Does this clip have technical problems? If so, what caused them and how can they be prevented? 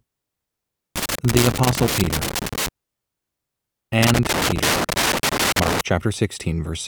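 Yes. Loose connector crackle occurs from 0.96 to 2.68 s and 4.01 to 5.81 s. A worn or dirty contact keeps breaking the connection, causing irregular scratching that shows as ragged waveform spikes and gaps and as broadband vertical streaks on a spectrogram. Cleaning or replacing the connector and securing the cable prevents it.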